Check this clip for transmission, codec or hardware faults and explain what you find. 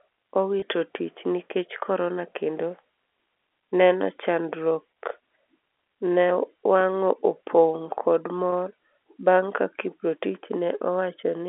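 Three brief glitches stand out, all the same kind of transmission fault: packet loss with pitch repetition, at 0.60–0.62 s, 4.94–4.96 s and 8.50–8.52 s. Each is a momentary held, slightly buzzy smear where the sound should be moving on. Each gap lasts about 20 ms, which fits a single lost packet. To cover the hole, the receiver repeated the last pitch period it had received. A gap this short never reaches the fade to silence, so each one comes across as a tiny frozen tone before the sound continues. The G.711 telephone coding can be heard in the band-limited line sound of roughly 300 Hz to 3.4 kHz.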